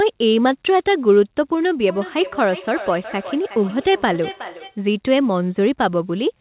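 From 1.86 to 4.82 s there's feedback echo between two devices: the speech loops back roughly every 0.4 s, thinner each pass, peaking about 15 dB below the original.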